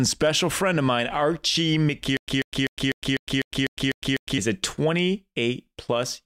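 From 2.17 to 4.38 s the speech stutters with silent gaps: a 141 ms fragment repeats nine times, each followed by about 109 ms of dead silence, every 250 ms. This is likely a stalled stream replaying its last buffer, losing the audio in between.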